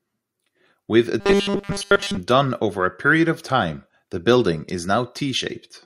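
Robotic sound from repeated short buffers runs from 1.20 to 2.17 s, ending just before "done over a period". Across that stretch the speech collapses into a rigid metallic buzz pitched at 200 Hz, which still loosely tracks the words. The likely cause is fresh audio arriving too slowly, so a tiny 5 ms slice is looped again and again in place of all the real signal, and that repetition period imposes the fixed pitch.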